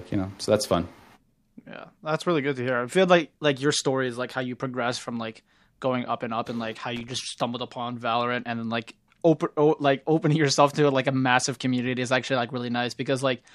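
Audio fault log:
6.96–7.12 s, loose connector crackle: a short, irregular burst of scratchy crackle lasting about 0.15 s cuts into the speech. A worn or dirty contact is making and breaking as it moves, chopping the signal on and off.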